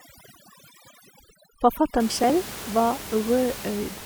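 For the first 2 seconds there's overdone noise removal: the denoiser was set too hard and gouges out bands near the noise floor, so quiet parts of the speech go with it and the background turns near-silent and twinkly. Then from about 2.10 to 2.30 s you get processor overload crackle. A handful of buffers, around 10 ms each by the sound of it, miss their deadline and get skipped, and those hard-edged gaps stack into a short gritty tear. Underneath, the room noise sits roughly 15 dB below the speech.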